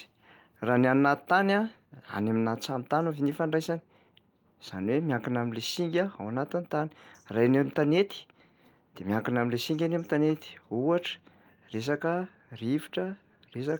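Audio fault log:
No faults can be heard anywhere in this speech clip.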